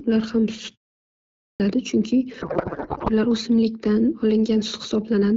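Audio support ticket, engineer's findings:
Clipped start after a pause, 1.2 s to 1.6 s. Speech resumes abruptly after about 0.5 s of silence, with about 400 ms of onset swallowed. Probable output device idling in the gap and needing time to wake and relock before audio passes.

Codec payload misread, 2.41 s to 3.10 s. The speech turns to garbled noise and warble that barely tracks it. This fits octet-aligned AMR-WB frames (12.65 kbit/s) parsed as bandwidth-efficient, putting every field at the wrong bit offset.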